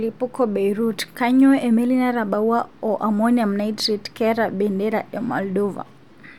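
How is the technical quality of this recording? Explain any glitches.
There's one glitch in the speech, at 4.17 s. You hear a tiny jump forward, because a few milliseconds of audio are missing. The likely cause is a dropped buffer (overrun): the recording software didn't collect that block before the hardware overwrote it, so the audio on either side got butted together with no gap.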